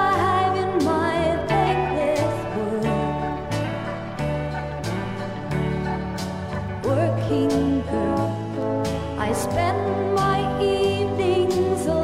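No technical faults occur at any point in the clip.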